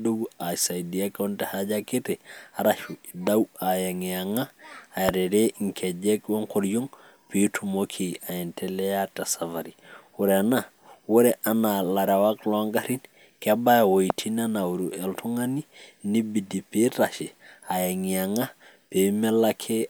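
Three single loud pops, at 3.27–3.29 s, 5.09–5.11 s and 14.10–14.12 s, each sit roughly 15 to 20 dB above the speech, likely from a voltage step such as a switch or static discharge. Unlike a dropout, the speech continues underneath every thump.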